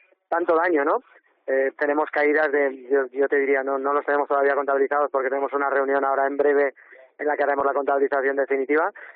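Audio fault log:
Nothing wrong turns up anywhere in this one, so there's nothing to log.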